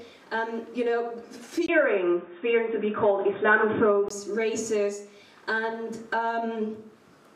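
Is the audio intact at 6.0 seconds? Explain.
Yes, the audio is intact at 6.0 seconds, with no fault at that moment.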